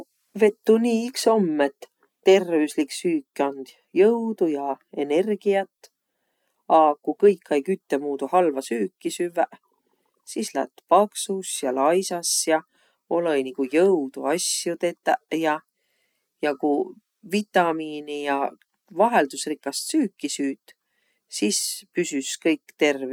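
No technical faults can be heard anywhere in the speech recording.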